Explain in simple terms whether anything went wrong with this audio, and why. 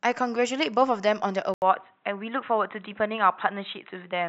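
At 1.54 s the speech suddenly turns dull and boxy, after a brief silence of about 80 ms, with nothing above 4 kHz and a faint new background noise. The loudness stays about the same. The likely cause is an input switched to a poorer device.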